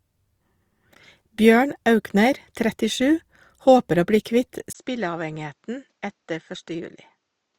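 At 4.73 s, right after "bli kvitt", the speech drops out for about 20 ms and then comes back duller and quieter until the end at 7.59 s. This is most likely an input switched to a poorer device mid-recording. The band narrows, so the top of the spectrogram goes blank from that point. The waveform steps down by roughly 10 dB, and a new noise floor sits far below the speech, around 50 dB down.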